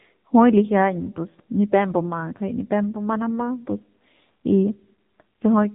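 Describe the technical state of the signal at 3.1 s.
At 3.1 s the speech sounds thin, boxed-in and audibly buzzy, with a synthetic edge and no air or sibilant sparkle, because nothing above 3.8 kHz survives. This is AMR narrowband mobile codec damage, present across the whole clip rather than at this moment alone. The codec rebuilds the voice from a vocal-tract model excited by sparse pulses in short subframes, and the coarse detail heard here fits a low rate of about 7.4 kbps.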